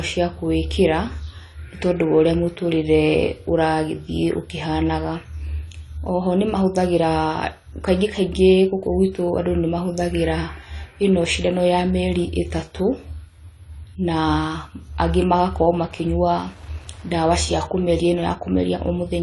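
Speech runs dull and smeared for the whole clip, with a plainly audible warbling, fizzy texture on sustained sounds and sibilants, and nothing above 11.4 kHz. This is likely AAC compression. The AAC-LC encoder spends too few bits on each frame, so it drops the top of the spectrum, leaves gaps, and patches some bands with substitute noise. The amount of damage points to a low bitrate of around 32 kbps. From 14.91 s to the end, a faint, steady ticking about ten times a second sits well below the speech. This is Wi-Fi interference. A nearby radio's beacon, repeating every 102.4 ms, and its data bursts are picked up and rectified by the audio circuit, turning bursts of radio energy into audible clicks.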